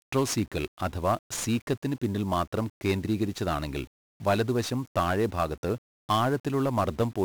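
From start to finish, the speech carries the sound of 1-bit DFPWM compression. Each sample keeps only one bit. That bit nudges a running level up or down, so the waveform is rebuilt as a rough staircase. The damage is heavy. A thick, broadband quantisation noise sits under everything. The speech sounds fuzzy and crackly. The treble is dulled or replaced by hiss. The grain fits a stream of about 48 kbps.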